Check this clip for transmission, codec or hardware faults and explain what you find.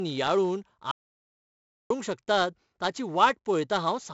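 Two faults are present in this speech clip: heavy codec damage across the whole recording and one stretch of total silence near the start.

4-bit ADPCM compression, throughout: each sample is coded as a small 4-bit step away from a predicted value, with the step size adapting as the signal changes. The coding error is broadband noise that tracks the signal's level, so every louder syllable carries a gritty hiss, and sharp onsets distort where the step cannot grow quickly enough. The damage here is heavy. Nothing is present above 7.7 kHz, which dulls the top end and fits a 16 kHz sample rate and a 64 kbps stream.

Audio dropout to silence, 0.91 to 1.90 s: the sound stops dead and the audio is replaced by silence for about 0.99 s, with no room tone or hiss remaining. The likely cause is a momentary loss of the input, such as a disconnect, a link failure or an accidental mute, while recording continued writing silence. 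Whatever was spoken in that second is gone, and the speech resumes abruptly at "शकतात ताची".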